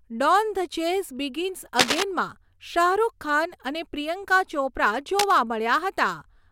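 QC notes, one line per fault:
1.79 to 2.04 s and 5.19 to 5.39 s, cable scratch noise. Dense, uneven bursts of scratching sit over the speech. The first is about as loud as the speech. The second is a little quieter. A worn cable or connector being moved is the likely cause, its contact resistance jumping rapidly.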